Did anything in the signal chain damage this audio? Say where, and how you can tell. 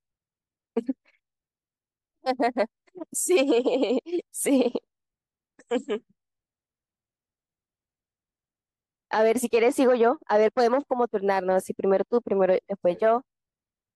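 No, nothing in the signal chain damaged this audio.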